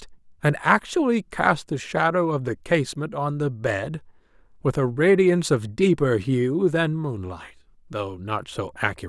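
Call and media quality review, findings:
Nothing to flag on this speech recording; no faults turned up anywhere in it.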